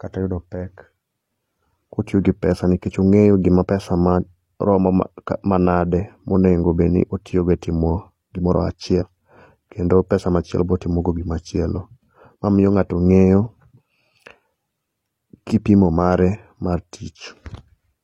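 At 3.63 s and again from 8.97 to 9.03 s, compressed frames are skipped. About one, then two, 46.4 ms frames never play, so the speech lurches ahead by roughly 50 and 100 ms. On a spectrogram each join shows as a thin vertical seam where the harmonic contours break.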